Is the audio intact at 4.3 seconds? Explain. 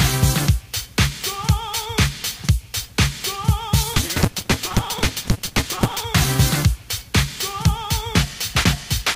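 No. From 3.93 to 6.05 s a block size mismatch (truncated) discards each block's tail, which fits 256-sample reads. This leaves a 188 Hz buzz and audio running 1.88 times fast at roughly normal pitch. A spectrogram shows evenly spaced vertical striations, and the waveform shows regular jumps.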